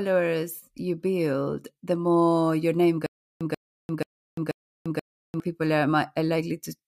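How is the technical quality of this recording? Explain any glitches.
The recording has one clear glitch, a stutter with silent gaps. From 3.06 to 5.4 s, just after "the more your name", a 137 ms burst of speech repeats four times, every 483 ms, each followed by 346 ms of dead silence. The likely cause is a stalled stream that replays its last buffered fragment at each retry and then runs empty, so the speech meant for that stretch is lost.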